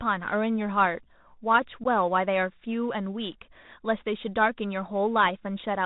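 From the start the speech sounds boxed-in and narrowband, with nothing above about 4 kHz, a grainy hiss under every phrase, and s sounds turned scratchy and harsh. Louder, brighter syllables distort audibly. This is the Bluetooth CVSD headset codec, which fits a 64 kbps CVSD link. It sends just one up-or-down bit per sample and adapts its step size. When the signal climbs faster than the step can follow, the waveform is mangled, and the coarse stepping leaves that granular noise floor.

At 1.84 to 1.86 s there is a short, hard-edged hole in the speech, and the speech comes back briefly quieter. This is unconcealed Bluetooth headset packet loss. About 15 ms of audio, a couple of packets' worth, was lost between headset and phone, and silence or an idle pattern was played in its place with no attempt to smooth over the gap. The CVSD decoder then needs a moment to rebuild its step size, so the level dips right after.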